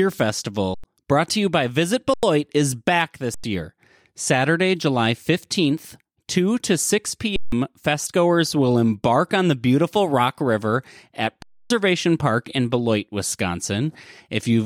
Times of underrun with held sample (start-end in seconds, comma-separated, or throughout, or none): 0.74-0.84, 2.14-2.23, 3.34-3.44, 7.36-7.52, 11.42-11.70